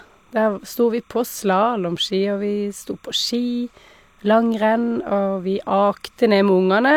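Timecode bleed runs throughout this speech clip, from start to finish: a faint chirping warble sits behind the voice, very low, around 40 dB below it. Linear timecode from an adjacent track or cable has leaked into the audio path. The code is a square wave that flips between two pitches near 1 kHz and 2 kHz, and its pattern repeats at 30 frames per second, giving the bleed its steady, rhythmic texture.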